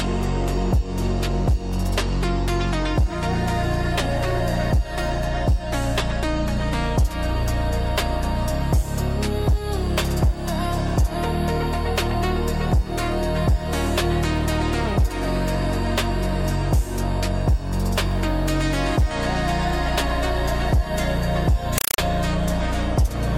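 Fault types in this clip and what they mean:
Compressed stream played as audio: an AC-3 bitstream reaches the output undecoded and is treated as ordinary samples. From 21.78 to 21.98 s, the sound gives way to loud chattering static. It comes as 4.0 ms noise bursts repeating at 31.25 Hz, which fits a 192 kbps stream. On a waveform these show as dense blocks separated by flat zero padding, and on a spectrogram as broadband vertical stripes.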